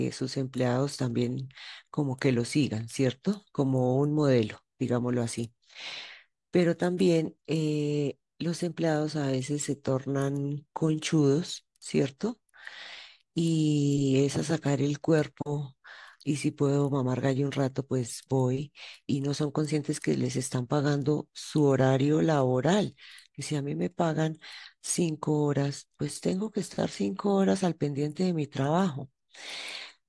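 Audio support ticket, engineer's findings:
No audible technical faults found in the speech signal on review; level, continuity and timing hold steady throughout, with no defect to attribute to any component.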